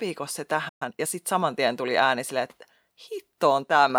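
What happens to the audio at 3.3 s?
Nothing goes wrong at 3.3 s; the speech carries on intact through that moment, with no dropout, click or distortion.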